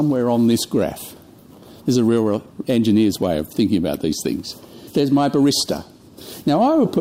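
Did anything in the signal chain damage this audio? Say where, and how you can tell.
Yes. Hard clipping occurs throughout, at a level stage or converter. The loudest peaks are pushed about 2 dB past full scale and cut flat. Well under one percent of samples are affected, so it shows as brief crackle on peaks rather than constant fuzz.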